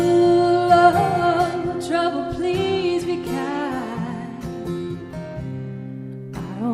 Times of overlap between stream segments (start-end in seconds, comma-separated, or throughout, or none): none